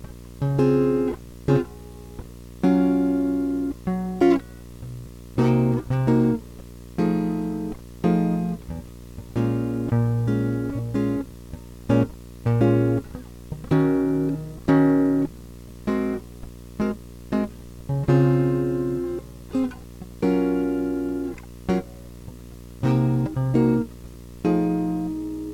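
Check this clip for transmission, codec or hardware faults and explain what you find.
One hardware fault runs through the whole music clip: video or display buzz. A screen or video cable is coupling its interference into the audio path. The picture refreshes at 60 Hz, and each field leaks in as a pulse. That gives a harsh buzz at 60 Hz with gritty hash spread above it. It sits under the music from start to finish, at about 20 dB below the signal.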